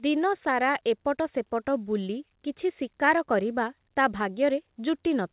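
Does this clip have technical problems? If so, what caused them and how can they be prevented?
No, nothing in this speech clip stood out as a technical problem on listening.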